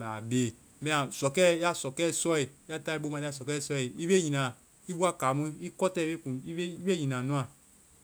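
No technical faults are audible.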